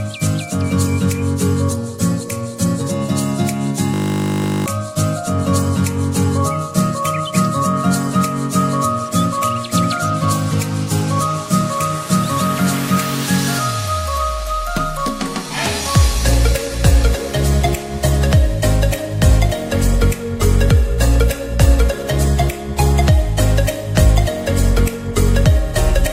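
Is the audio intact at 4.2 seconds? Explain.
No. From 3.94 to 4.66 s a system hang loop repeats one 20 ms buffer 36 times, giving a steady 50 Hz buzz and losing about 0.7 s of audio.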